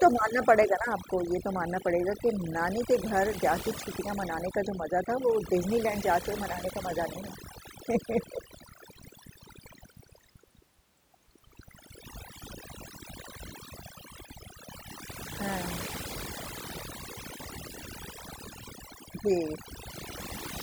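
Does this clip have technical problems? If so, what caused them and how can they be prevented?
Yes. Overdone noise removal throughout: aggressive spectral reduction mutes bands near the noise estimate, taking quiet speech detail with it, leaving twinkling specks. Prevent it by setting milder reduction strength.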